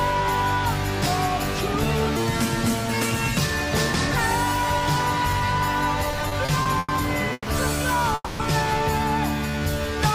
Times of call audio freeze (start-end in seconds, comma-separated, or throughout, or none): 7.33-7.49, 8.14-8.41